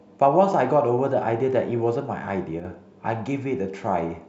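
At 2.60 s the speech suddenly drops by about 6 dB, recovering at 2.65 s, a 50 ms dip with hard edges. It is likely one channel drops out: one stereo side went silent briefly, so the mono sum lost half its shared signal.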